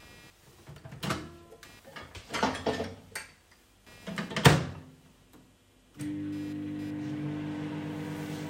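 From start to finish the audio carries computer activity noise: a buzzing chirp pulsing at around 200 Hz, roughly 30 dB below the signal. Processor or graphics load shifts the shared ground under the audio circuit, so the buzz follows machine activity rather than the sound itself.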